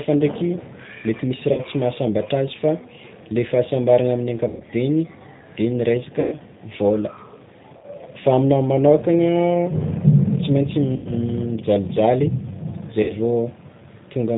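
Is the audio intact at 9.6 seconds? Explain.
No. The speech at 9.6 s, like the whole clip, passed through a G.729 codec, which fits an 8 kbit/s stream, leaving it band-limited below 4 kHz and audibly rough, buzzy and synthetic.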